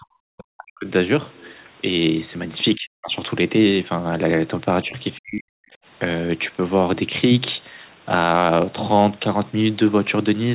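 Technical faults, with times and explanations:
0 to 0.9 s, 2.75 to 3.15 s, 4.84 to 4.96 s and 5.19 to 5.75 s: speech suppressed in double talk. The talker's level collapses in pieces, by roughly 40 dB at its deepest in the first, second and fourth spans and by about 15 dB in the brief dip near 4.9 s. The likely cause is an echo canceller that, with both sides speaking at once, could not tell the near talker from loudspeaker echo and attenuated both together.
1.33 to 1.69 s: other side's voice leaking through. A faint second voice sits under the talker, around 30 dB down, audible as a residual scrap rather than a sustained layer. It likely comes from the far end played on the device's loudspeaker and picked up by the microphone, with the echo canceller leaving this remnant unremoved. The whole clip is band-limited near 4 kHz, consistent with a G.711 narrowband call path.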